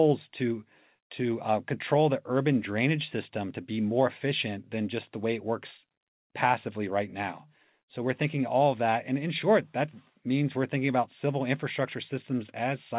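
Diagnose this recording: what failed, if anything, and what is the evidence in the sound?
Nothing failed in this recording.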